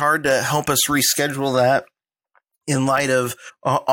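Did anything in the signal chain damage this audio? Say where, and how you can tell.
Yes. Damaged data in a compressed stream causes a brief blip from 3.49 to 3.51 s. Corrupt bytes made the decoder misread frames and lose sync.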